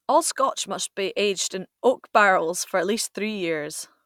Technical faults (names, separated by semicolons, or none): none